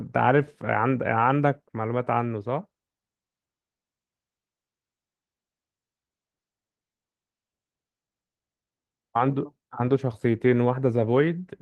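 No technical faults can be heard anywhere in this speech recording.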